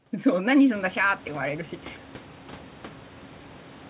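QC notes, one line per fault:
No faults to note in this clip.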